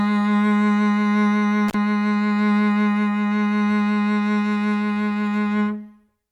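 A short music clip with one intermittent contact fault: at 1.68 s the music drops out for about 43 ms, with a crackle at each edge and faint hiss in the gap, before returning by 1.74 s. That's a loose cable or plug momentarily opening.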